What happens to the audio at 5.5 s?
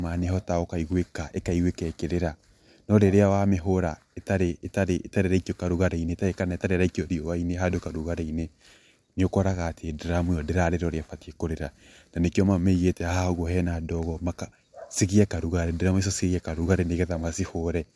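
Nothing goes wrong at 5.5 s; the speech continues cleanly through that moment, with no dropout, click, distortion or other audible fault.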